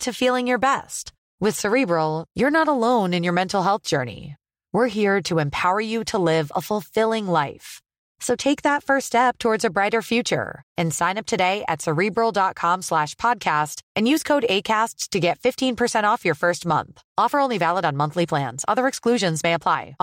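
No technical faults can be heard anywhere in this speech recording. There is nothing in it that calls for a time or an explanation.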